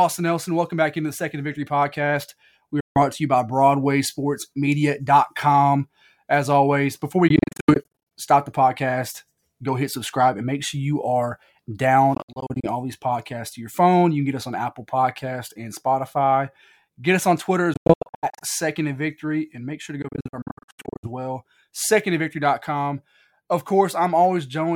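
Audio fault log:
2.80–2.98 s, Bluetooth dropout: packets likely missed their delivery time to the headphones, so the speech cuts to silence for about 0.15 s, then continues as if it had played through.
7.28–21.08 s, Bluetooth dropout: the link likely lost packets repeatedly at 7.28–8.11 s, 12.14–12.68 s, 17.74–18.45 s and 20.02–21.08 s. Each episode breaks the speech into short silent holes. Together the holes cover 0.21–0.59 s of each episode, and the longest single gap is 0.06–0.09 s.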